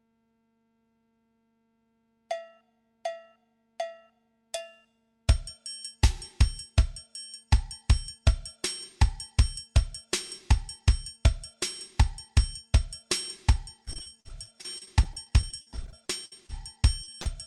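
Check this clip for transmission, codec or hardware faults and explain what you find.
Repeated packet loss (robotic sound) runs from 13.85 to 17.26 s. Dozens of short dropouts, the longest 62 ms, were bridged by stretching the preceding sound, and about 21% of the stretch is patched this way. The result is choppy audio with pieces missing.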